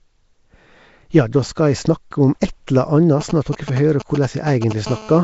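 Throughout the speech there is plainly audible codec damage: a rough, hissy halo and a smeared, underwater quality, with nothing above 7.7 kHz. This is likely Nellymoser compression, at a rate that fits about 32 kbps. Unlike an ordinary low-bitrate blur, the noise-filled weak bands give the hiss its grainy, hollow character.

From 3.21 to 4.73 s come GSM signalling bursts, around 10 dB below the speech. A nearby 2G phone sending short groups of radio pulses is rectified by the audio circuit, producing a galloping dit-dit-dit of brief 217 Hz buzzes. Its broken, intermittent rhythm is what separates it from a call's continuous buzz.

From 4.87 to 5.19 s a GSM phone buzz follows, about 15 dB below the speech. The phone is now transmitting continuously at 217 bursts a second, and the rectified pulses give a hard, raspy 217 Hz buzz rich in harmonics. It is steady rather than galloping, and unrelated to the speech.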